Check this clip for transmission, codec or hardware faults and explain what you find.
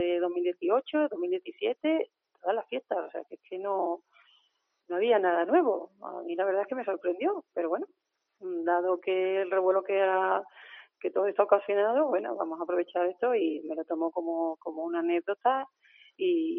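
One fault stands out: a stretch of sound cut by the noise suppressor between 1.45 and 1.84 s. The suppressor misjudged part of the signal there as background noise and applied its gain reduction to it, pulling the level down by about 13 dB at the deepest point. In total, roughly a fifth of a second is affected. Sustained and decaying parts of the sound sink and their tails end early, while sharper onsets survive largely intact.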